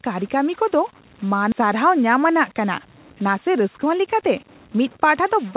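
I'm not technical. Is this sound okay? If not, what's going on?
No, there are three problems with this recording.

Throughout the clip there is a distortion riding on the speech, and the quiet moments between phrases are filled with a gritty hiss instead of silence. This is most likely a stuck bit: one of the digits that make up each audio sample is frozen at the same value, probably from a faulty connection or converter. Roughly half the samples come out wrong, which gives the distortion and the noisy pauses.

At 1.52 to 1.54 s there is a skip ahead. Playback jumps forward with no gap, and about a second of speech is simply missing. The words on either side of the jump are joined almost directly. This happens when the receiving side has a backlog of audio waiting and throws part of it away to catch up, so the delay drops by about that same second.

From 3.2 s to 5.54 s the speech runs slightly fast, at about 108% of normal speed, while the pitch stays the same. 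This is a jitter buffer speed-up. The receiver had built up extra waiting audio and trimmed out many tiny slices, each only a fraction of a syllable, to shrink the delay. Together they remove about a fifth of a second, which makes the delivery sound a little hurried.

The sound also has the narrow, telephone-like quality of a standard call connection, with nothing above 4 kHz.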